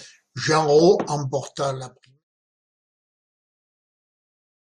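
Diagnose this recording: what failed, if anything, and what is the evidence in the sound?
Nothing stood out on listening; the only notable change is a gradual fade-out that begins at about 1 s and ends at 2.25 s, smooth and without any click or hard edge.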